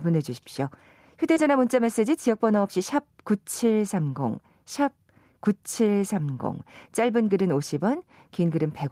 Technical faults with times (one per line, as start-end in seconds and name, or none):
1.33-1.38 short concealed packet loss
1.36-1.38 lost packet rebuilt from error correction